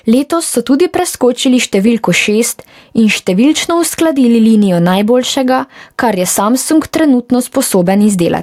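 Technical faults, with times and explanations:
Throughout, gain pumping. The swing is around 10 dB. The likely cause is input gain set far too high, with a fast limiter or compressor clamping down on each loud syllable and releasing in the gaps. That constant push and pull brings loud and quiet passages close together. The speech sounds squashed.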